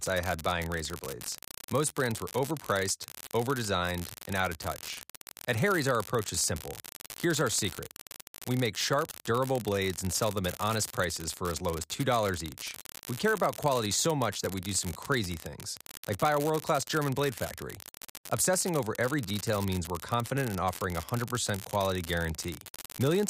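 An unreliable data bit runs through the whole recording. One line of the digital path is marginal, so its bit lands wrong in a random share of samples, and each error jumps the waveform by the same fixed step, about -15 dBFS. Because those spikes are scattered at random, they add up to a steady crackling fizz laid over the speech, and it carries on unchanged through the pauses.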